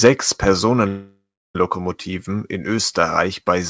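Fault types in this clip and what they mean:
microphone overload: Right at the start, from 0.05 to 0.09 s, the loudest peaks in the speech are flattened, about 5 dB past the converter's ceiling. Roughly a tenth of the samples there are cut. This is likely from an input level set too high, and gives a harsh, crackly edge.
microphone volume stepped down: The speech and background drop suddenly by 3 dB, once at 0.07 s, inside the distorted opening, and again at 1.75 s. Each is a single step, not a fade. It likely comes from the call software lowering an input it judged too hot.
call audio freeze: From 0.88 to 1.56 s the sound stalls, which likely means delayed packets left the jitter buffer empty. The last sound carries on as a fading buzz or hiss and then about 330 ms of silence. The speech then resumes where it stopped, 668 ms late, with nothing lost.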